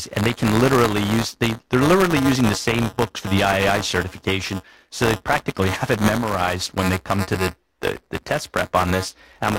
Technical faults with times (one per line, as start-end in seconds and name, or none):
0.00-9.58 buffer tearing